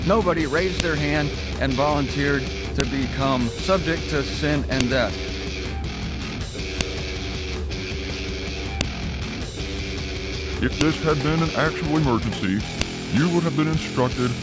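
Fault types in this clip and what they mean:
File header played as audio: sharp, loud clicks at 0.8, 2.8, 4.81, 6.81, 8.81, 10.81 and 12.81 s, where 2 s pieces were joined with their WAV headers kept, so those bytes play as sound.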